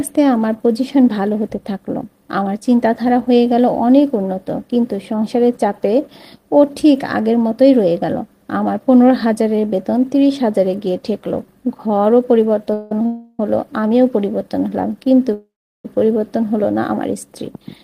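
Packets were most likely held back in transit, draining the jitter buffer and causing a call audio freeze at 12.73 s, 13.06 s and 15.33 s. Each time, the receiver stretched the last sound into a fading buzz for 175 ms, 330 ms and 510 ms. The third fades to silence for its final 360 ms. Nothing is lost: the audio resumes where it stopped, pushed later by each freeze's length.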